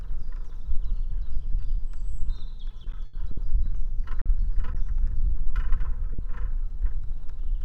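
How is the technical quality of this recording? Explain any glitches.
The recording has three network-related glitches, all caused by late or lost packets.

From 2.71 to 3.40 s there is choppy audio with small pieces missing. This is repeated packet loss, which produces the robotic sound. Five gaps hit this stretch in quick succession, the longest about 80 ms. Each time, the receiver patched the hole by continuing the last sound. About 180 ms was filled that way, roughly a quarter of the span, and about 60 ms of real audio never arrived.

Between 4.22 and 4.29 s a sound hangs on slightly too long. This is a short stall from a late packet. The packet missed its deadline, the jitter buffer ran dry, and the receiver stretched the previous sound for about 40 ms while it waited. Playback then picked up exactly where it had stopped, so nothing is lost, but the timing shifts by about 40 ms.

Between 6.13 and 6.22 s the sound turns into a brief held, fading tail and then jumps ahead. 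This is a burst of packet loss. Several consecutive packets were lost or arrived too late to play. The receiver extended the last sound for about 60 ms, lowering its level as the gap went on. When audio resumed, about 60 ms of the original had been skipped.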